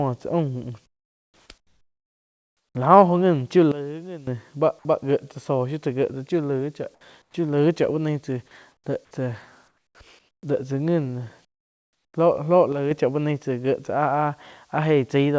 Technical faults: comfort noise in place of the background; sudden gain jump

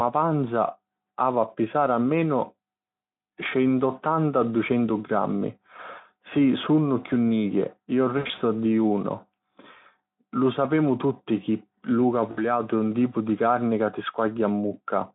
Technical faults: VoIP packet loss concealed by the speech codec

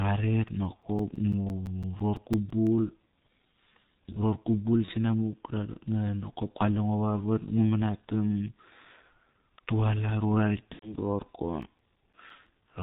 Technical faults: G.723.1 codec; CD scratch ticks; VoIP packet loss concealed by the speech codec

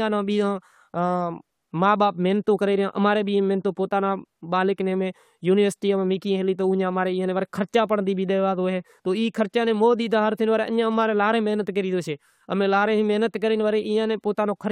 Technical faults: none

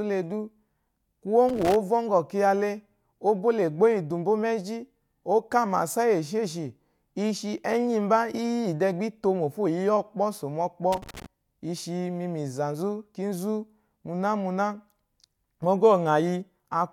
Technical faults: loose connector crackle

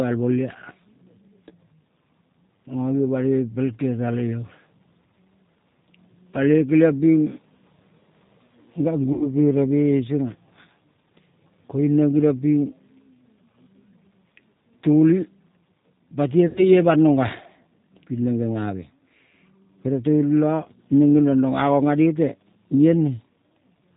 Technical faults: G.729 codec; VoIP packet loss concealed by the speech codec

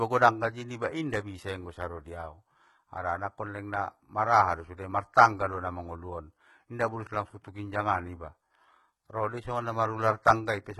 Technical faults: HE-AAC compression

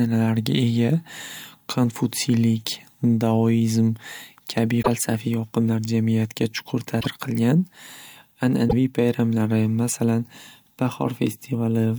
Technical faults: broken MP3 bit reservoir

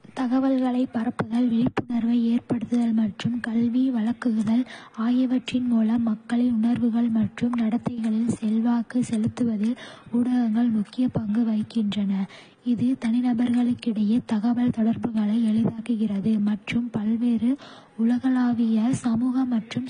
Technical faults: transcoding between lossy codecs

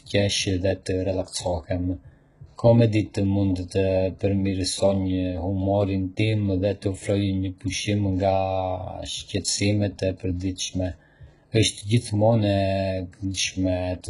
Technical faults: HE-AAC compression

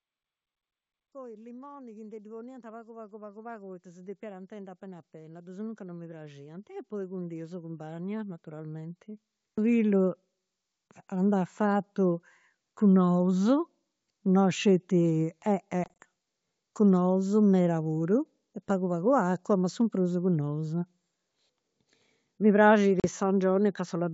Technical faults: automatic gain rising; packet loss on an ADPCM call

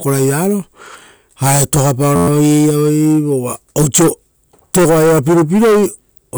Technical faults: system hang loop

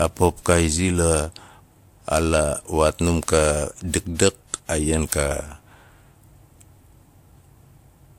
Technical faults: transcoding between lossy codecs

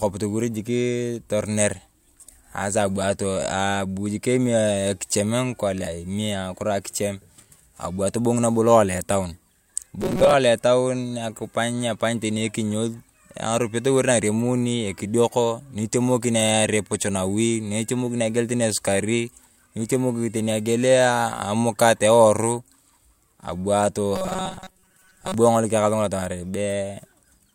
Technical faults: robotic sound from repeated short buffers

